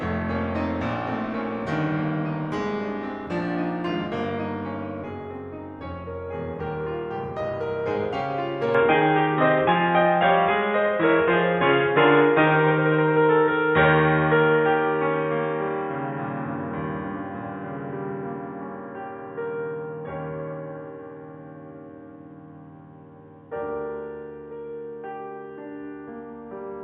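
Input switched to a poorer device, from 8.75 s to the end: the music abruptly loses everything above about 3.8 kHz and turns dull and boxy, with no gap at the change. The level shifts by roughly 5 dB, and a faint new background noise appears, around 45 dB below the music. The likely cause is the recording input changing mid-take to a narrower-band microphone or headset path, which brings its own tone, gain and noise.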